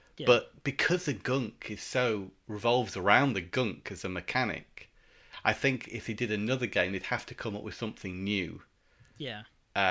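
No technical faults are audible.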